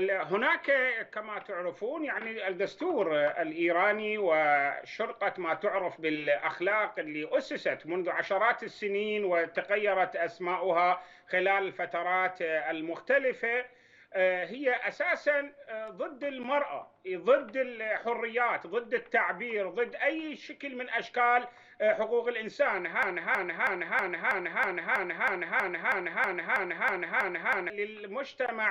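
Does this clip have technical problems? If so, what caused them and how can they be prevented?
Yes: from 23.03 to 27.70 s a broken-record loop repeats one 0.32 s fragment fifteen times, likely a stalled player resending its last buffer. Watchdog-reset stalled playback.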